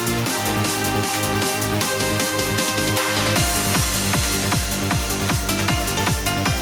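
Nothing is technically wrong with this audio.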